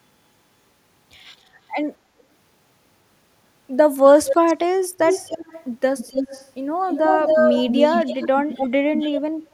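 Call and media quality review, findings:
Echo leak: copy trailing speech by 265 ms; faint at 1.4 and 2.19 s, near speech level at 4.05–4.54, 4.97–5.65, 5.98–6.51, 6.86–8.7, 8.98–9.21 s. Likely far-end canceller residual from loudspeaker pickup. Spectrogram: duplicated harmonic stripes offset 265 ms.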